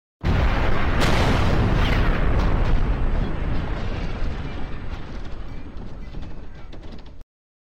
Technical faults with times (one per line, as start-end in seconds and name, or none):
none